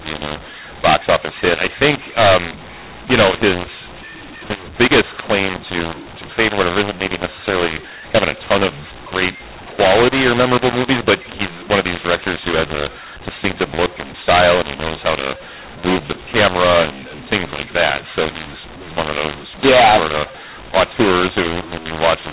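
From start to finish, the speech has a mu-law and A-law mix-up. The telephone audio was coded with mu-law but decoded as A-law. The two G.711 curves map 8-bit codes to levels differently, so every sample lands at the wrong amplitude. Some come out too loud, others too soft. The quietest samples jump well above silence. The voice sounds harsh and gritty. Pauses fill with noise. The band still stops near 4 kHz, which fits 8 kHz telephone sampling.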